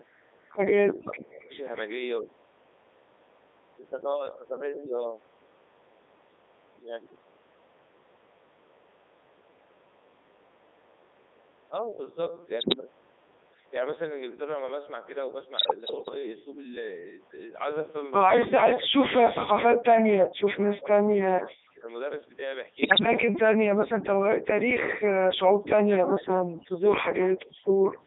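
Throughout, the speech has gone through the Codec 2 vocoder at 3.2 kbit/s. It sends only pitch, voicing, energy and a spectral envelope, then rebuilds the voice from sine waves within roughly 300 Hz to 3.7 kHz. The heavy damage leaves it buzzy and robotic.

Bit errors on digital voice radio hit at 12.60–12.75 s, 15.58–16.14 s and 22.82–23.06 s. Error rates of several percent corrupt whole vocoder frames, so pitch, level and tone colour jump into warbles and garbled bleeps.

From 18.48 to 21.0 s, 21.25 to 21.89 s, 23.2 to 24.68 s, 25.28 to 26.86 s, and 27.91 s to the end, the voice dips by up to about 40 dB or drops out in pieces. This is likely speech suppressed in double talk, where an echo canceller turned this talker down while the other side spoke.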